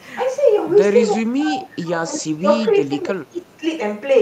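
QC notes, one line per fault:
1.15 to 3.64 s, speech suppressed in double talk: the speech level sinks across this stretch, with around two seconds of it turned down in all and the deepest dip reaching about 15 dB. The likely cause is an echo canceller meeting simultaneous talk from the far end. Unable to tell the near talker from the loudspeaker echo it was trying to remove, it attenuated everything, so the near-end speech was pulled down along with the echo.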